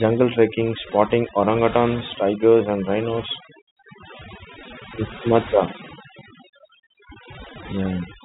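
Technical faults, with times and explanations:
Throughout, overdone noise removal: the background drops and breaks up into twinkling specks, because a noise-reduction stage set too aggressively is switching off individual frequency bands near its noise estimate, taking quieter parts of the speech with them.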